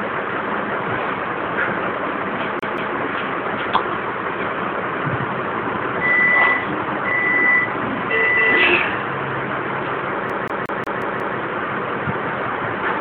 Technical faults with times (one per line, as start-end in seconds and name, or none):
2.59-2.96 CD stuck on one turn
10.30-11.38 CD stuck on one turn